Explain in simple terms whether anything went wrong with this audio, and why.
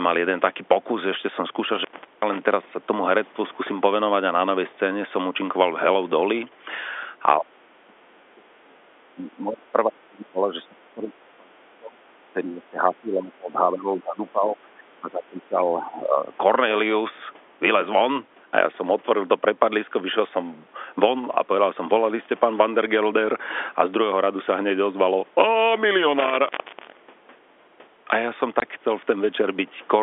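Several things go wrong here, from three different causes.

Between 1.65 and 2.42 seconds, the sound cuts out for about 0.38 seconds. There is crackle on either side of the gap. This is an intermittent contact: a loose cable or plug briefly lost its connection. It happens again from 26.19 to 27.38 seconds, this time for about 0.6 seconds.

From 7.38 to 16.31 seconds, the speech keeps dipping and breaking up. It adds up to roughly seven seconds, and at worst it falls almost to silence. The likely cause is speech suppressed in double talk. Both ends of the call spoke at once, and the echo canceller turned this side down.

At 28.6 seconds there is a tiny hole, about 20 milliseconds long. This is packet loss filled with silence. The gap matches one lost packet of sound. The receiver played nothing in its place.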